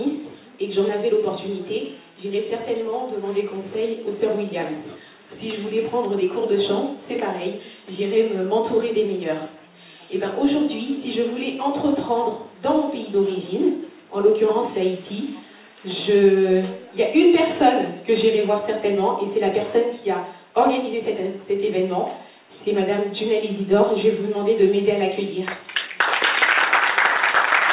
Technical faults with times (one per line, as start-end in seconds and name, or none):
none